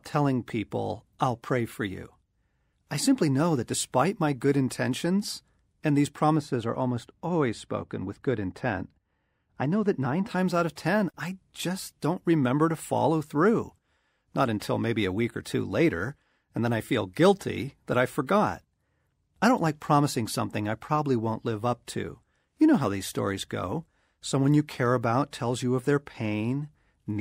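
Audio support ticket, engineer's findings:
Speech goes dull and muffled from 6.36 to 10.29 s, right after "good intentions and these" until "out of ten I". Looks like de-emphasis applied wrongly: treble cut on audio with no pre-emphasis, sloping down to about 13 dB at 10 kHz. Check the EQ stage.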